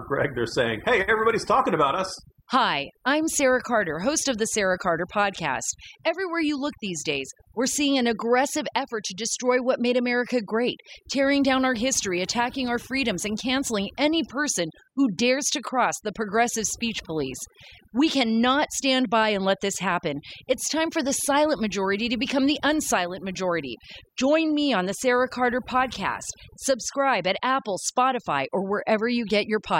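Throughout the speech, overdone noise removal is audible: a noise reducer pushed too hard has gated individual frequency bands whenever they neared its noise estimate, leaving near-silent gaps with twinkling specks and quiet parts of the voice cut away. A spectrogram shows scattered isolated bins and holes.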